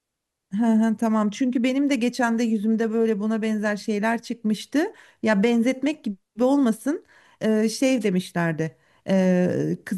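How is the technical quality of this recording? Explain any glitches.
There's one glitch worth flagging. At about 8.00 to 8.05 s you get a wireless microphone noise hit: the FM radio link briefly fades as reflected signals cancel, the receiver's noise floor jumps up, and it comes through as a quick swish of static over the speech.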